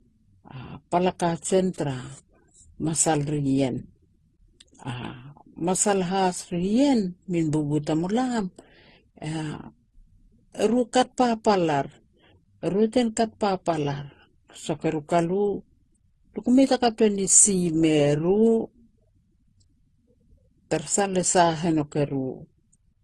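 Throughout, the speech stops at 12 kHz and carries overlapping smearing and warbling, likely from transcoding between lossy codecs, rather than one codec's uniform artefacts.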